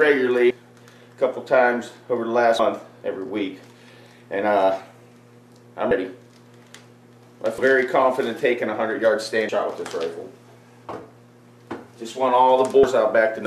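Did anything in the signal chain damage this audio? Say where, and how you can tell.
Yes, compressed frames skipped in decoding: at 0.50, 2.59, 5.91, 7.58, 9.49, 11.39 and 12.83 s the sound jumps ahead by whole 26.1 ms frames.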